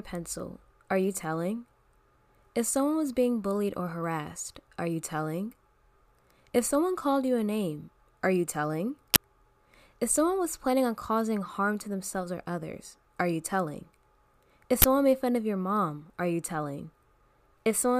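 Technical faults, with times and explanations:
9.14–9.16 s and 14.82–14.84 s, uninitialised buffer: two short, harsh blasts of digital noise cut into the speech, each lasting about 20 ms. That fits an entire playback block being sent to the output before any audio had been written into it, so whatever junk was left in that memory was played as if it were samples. Because those leftover values have nothing to do with the speech, the result is a brief, loud burst of noise rather than a click or a dropout.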